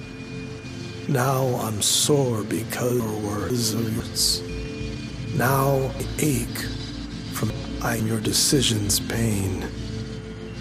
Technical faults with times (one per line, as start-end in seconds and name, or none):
3.00-4.00 chunks out of order
6.00-8.00 chunks out of order